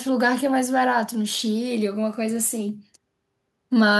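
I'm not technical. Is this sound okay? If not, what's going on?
Yes, nothing in this recording stood out as a problem when listening to it.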